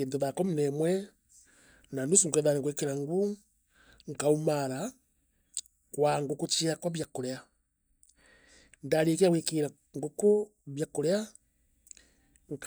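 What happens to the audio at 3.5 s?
Nothing goes wrong at 3.5 s; the audio there is intact, with no dropout, click, distortion or other fault to be heard.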